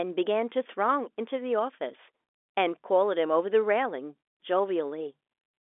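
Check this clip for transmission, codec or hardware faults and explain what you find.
No transmission, codec or hardware faults are present here.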